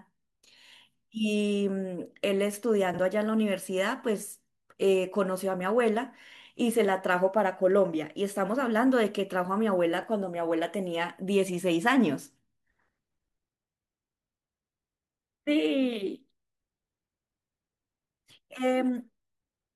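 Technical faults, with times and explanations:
2.91–2.99 s, 10.01–10.03 s and 18.00–18.18 s: frames out of order. At each point two neighbouring runs of frames reached the decoder swapped and were decoded in that order. A short stretch of speech therefore plays with its two halves exchanged, in blocks of 46.4 ms, 8.7 ms and 92.9 ms. Each spot sounds like a garbled flutter. No time is lost.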